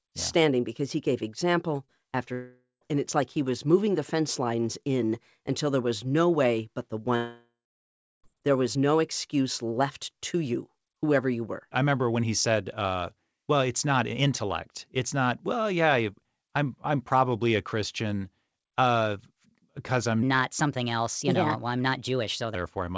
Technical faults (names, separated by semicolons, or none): short concealed packet loss; long network dropout; section at the wrong speed